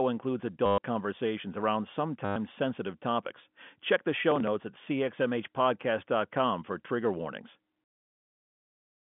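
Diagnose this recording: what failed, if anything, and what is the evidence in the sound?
Network stage, packet loss with last packet repeated: at 0.66 to 0.78 s, just before "conversations around", and at 2.25 to 2.36 s, between "conversations around" and "sensitive topics", the sound stutters robotically for 120 ms and 110 ms. The receiver replayed the last packet, which fits 10 ms packets, so the repeats form a buzz near 100 Hz, seen on a spectrogram as evenly spaced vertical ticks with a frozen, repeating waveform.

Driver or buffer stage, processor overload crackle: from 4.32 to 4.47 s a burst of gritty crackle rides on the sound. The processor missed roughly 5 deadlines for buffers of roughly 5 ms, and each missed buffer was skipped. The waveform shows small hard-edged gaps and jumps, and the spectrogram shows thin broadband vertical lines across the whole G.711 telephone band.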